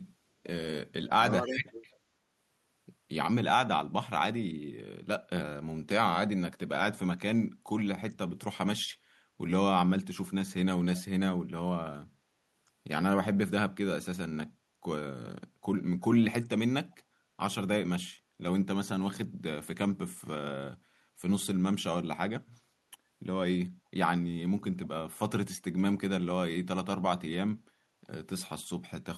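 At 1.07 to 1.21 s, and again from 1.4 to 1.86 s, the speech drops by around 30 dB in short pieces, a few tenths of a second lost in total. This is speech suppressed in double talk, likely from an echo canceller that turned the local talker down while the far side spoke. Inside that stretch, at 1.47 to 1.55 s, a faint copy of the speech returns 325 ms late at about 20 dB below it. This is echo leak, likely the far end's canceller letting loudspeaker sound back into its microphone. It recurs at 16.91 to 16.96 s, much quieter at about 40 dB down. The fixed delay sets it apart from room reverberation, which would trail the speech smoothly.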